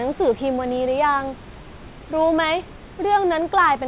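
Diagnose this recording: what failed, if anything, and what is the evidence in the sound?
Nothing failed: the speech is band-limited at 4 kHz, which fits a narrowband G.711 call path working as intended, and the room noise sits about 24 dB below the speech, part of the recording rather than any stage of the chain.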